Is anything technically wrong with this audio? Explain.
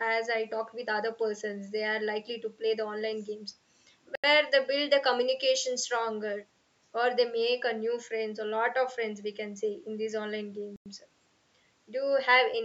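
Yes. There are two Bluetooth stall dropouts in the speech, at 4.15 to 4.24 s (83 ms) and 10.76 to 10.86 s (97 ms). Each is a clean cut to silence before the audio resumes, likely because radio interference delayed packets until the headphones' buffer emptied and playback paused for the retransmissions.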